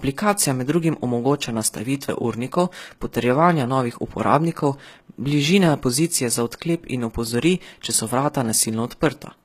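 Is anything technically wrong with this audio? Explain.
Yes. Throughout the speech there is plainly audible HE-AAC compression damage, likely from a low bitrate near 20 kbps. The treble is synthesized by copying lower bands upward, so s sounds turn gritty and lispy. A spectrogram shows smeared, repeated high-band texture and nothing above 14.9 kHz.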